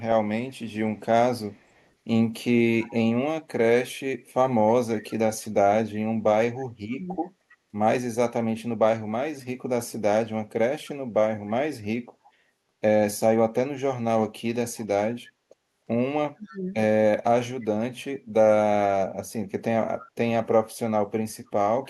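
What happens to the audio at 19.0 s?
Nothing goes wrong at 19.0 s: the speech continues intact there, with no dropout, click, distortion or other fault.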